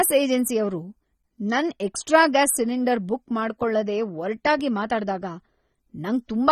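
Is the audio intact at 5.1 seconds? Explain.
No, AAC compression damage runs through the whole clip, including 5.1 s. The sound is dull and smeared, likely from low-bitrate AAC-LC, and a spectrogram shows a hard ceiling near 14.2 kHz.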